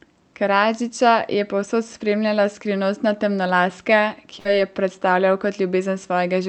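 Speech clip with a burst of packet loss from 4.39 to 4.48 s: the receiver stretches the last sound for about 55 ms, fading it, then resumes at "je predstavljal" with roughly 60 ms missing. The audio passed through an Opus call path whose band limit sits near 8 kHz.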